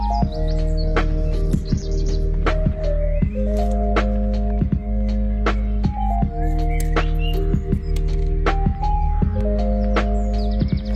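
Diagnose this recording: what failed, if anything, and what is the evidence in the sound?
At the network stage, the adaptive stream switched to a lower bitrate from 0.82 to 2.82 s. Quality drops abruptly without a gap, and codec artefacts rise. A spectrogram shows nothing above 12.1 kHz there, fitting a fall from 64 to 12 kbit/s.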